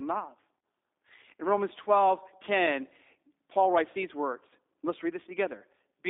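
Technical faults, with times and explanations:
Throughout: G.729 codec. Sound is plainly rough and synthetic, held to roughly 250 Hz–3.7 kHz, as a sparse-pulse model at what sounds like 8 kbit/s rebuilds it.
0.60–0.63 s: VoIP packet loss concealed by the speech codec. A 30 ms stretch turns into a fading buzzy tone or coloured noise as the decoder extrapolates its last pitch and filter, which fits a single lost packet.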